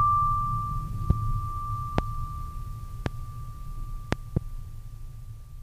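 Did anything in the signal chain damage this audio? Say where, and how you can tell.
Yes. There are loud pops in the music at 1.10 to 1.13 s, 1.98 to 2.01 s and 3.06 to 3.09 s, and a double pop spanning 4.13 to 4.39 s. Each stands roughly 20 to 25 dB above the music, which carries on underneath. These sharp transients sit on top of the signal without any break in it, so the likely cause is voltage steps in the analogue wiring or a driver glitch, shaped into brief thumps downstream.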